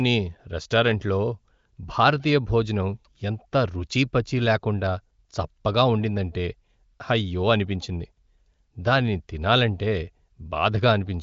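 No technical faults are audible anywhere in this recording.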